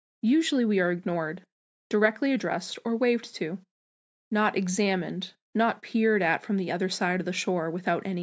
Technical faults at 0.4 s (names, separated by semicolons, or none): none